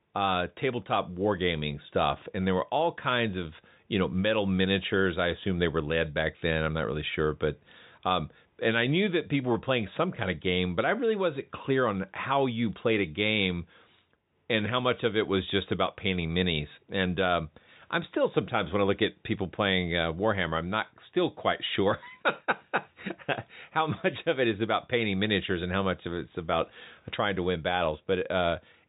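No technical faults are audible.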